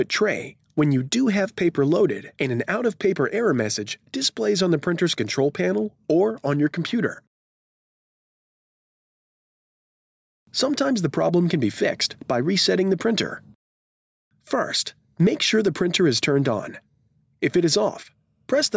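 Gain pumping runs through the whole clip: the gain ducks by roughly 5 dB under each loud sound, squashing loud and soft parts together. The likely cause is input gain set far too high, with a fast limiter repeatedly pulling the level down. The call microphone processing trims the lowest bass and leaves nothing above 8 kHz.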